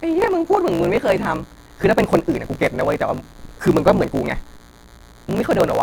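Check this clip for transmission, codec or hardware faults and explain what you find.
Two faults run through the whole recording, both steady rather than momentary.

Right from the start there's a DECT cordless phone buzz, a thin, fizzy 100 Hz tone full of harmonics. A nearby handset or base fires radio bursts every 10 ms, and the audio circuitry rectifies them into sound. It sits well down under the speech, roughly 30 dB below.

Also throughout, a block size mismatch (truncated) adds a lower buzz near 54.4 Hz. One stage writes longer blocks than the next reads, which fits 1024-sample blocks being clipped, so each block's tail gets dropped. The speech runs about 1.16 times fast at roughly normal pitch.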